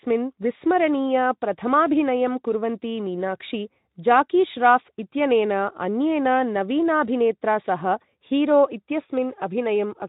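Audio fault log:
No faults heard anywhere in this speech recording.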